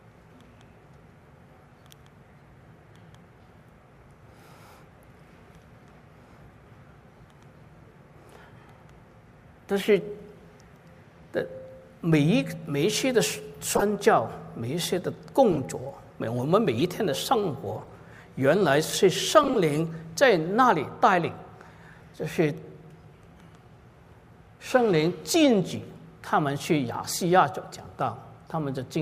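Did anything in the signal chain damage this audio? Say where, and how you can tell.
Yes, at the codec stage: corrupt frames were decoded, giving brief chirps and noise bursts at 13.71–13.83, 15.52–15.58, 16.78–16.82, 17.80–17.93 and 19.43–19.56 s, the loudest near -10 dBFS. Flipped bits put energy at wrong frequencies for a few frames each. Concealed packet loss would smear or fade instead.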